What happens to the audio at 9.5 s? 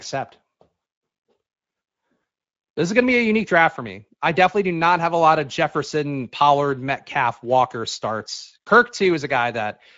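Speex codec damage, present throughout, leaves the speech hoarse and buzzy from starved CELP excitation, consistent with about 16.8 kbps. Unlike plain band-limiting, it roughens the speech itself, with nothing above 7.7 kHz.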